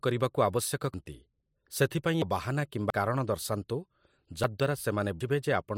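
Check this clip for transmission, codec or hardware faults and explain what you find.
The speech has five abrupt skips at 0.94, 2.22, 2.90, 4.44 and 5.21 s. Each is a jump forward, losing roughly 0.10 to 0.15 of a second with no gap. This is likely a dropped buffer (overrun), where samples were overwritten before being read and the two sides were spliced together.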